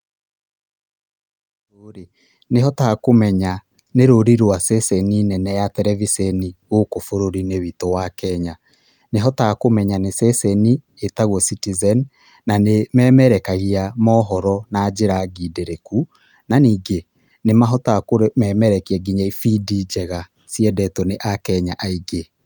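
Nothing stood out on listening to this speech recording, which opens with a smooth fade-in that reaches full level at about 2.9 s.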